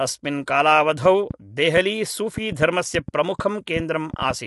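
From the start, the speech has the plainly audible grain of low-delay AAC compression, likely AAC-ELD at a rate that sounds like around 32 kbps. Too few bits are spread over the frequency lines of each short frame, so noise fills the gaps between harmonics and the voice turns rough. On a spectrogram the harmonics look smeared and speckled, and nothing appears above 11.6 kHz, a flat ceiling across the whole clip.

From 1.06 s to 4.31 s a train of clicks ticks over the speech, likely from interference or a faulty connection injecting pulses. There are about fifteen of them, at about 4.3 per second but unevenly spaced, each a similar short pop rising around 5 dB above the speech. On the waveform they show as narrow spikes standing clear of the signal. On a spectrogram they appear as thin vertical lines spanning the band up to the ceiling.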